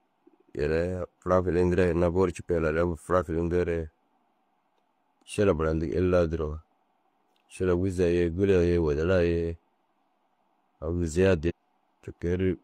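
Right near the end, at about 11.46 to 11.52 s, the speech lurches forward with a short blip, as if a chunk went missing. That's most likely a stream segment skipped: one piece of the stream failed to load and playback jumped to the next.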